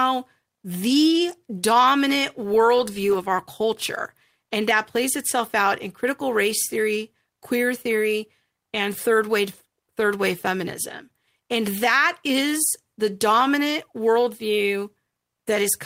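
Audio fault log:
There is no fault in this speech.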